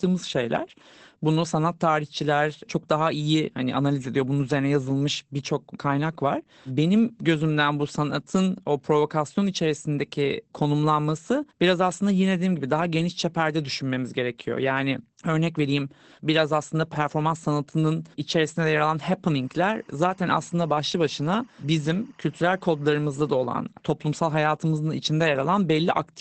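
From start to finish, the speech carries Opus voice compression damage that is plainly audible. Nothing is present above about 8.4 kHz, so sibilants and breath detail are cut off, and the voice sounds muffled and slightly hoarse with a faint robotic edge. That fits the SILK linear-prediction coder running in wideband mode at a low rate, likely around 12 kbps with 20 ms frames, where the excitation is coded too coarsely to keep the natural texture.

From 19.36 s to 23.46 s, timecode bleed appears: a steady chirping warble sits behind the speech at about -35 dB. Linear timecode from an adjacent track or cable has leaked into the audio. Its square wave flips between two pitches near 1 kHz and 2 kHz as the bits change, and the regular rhythm of the warble fits a 24-frame code.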